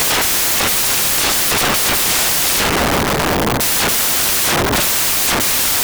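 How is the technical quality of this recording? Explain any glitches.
The quality is very poor: the recording is unusable as heard because one fault runs through it from start to finish. That fault is samples built from the wrong bytes. The bytes making up each sample have been joined in the wrong order or at the wrong offset, so the rapidly changing low-order bits end up as the dominant part of every value. The speech becomes a loud, harsh roar of broadband noise, close to white on the louder sounds.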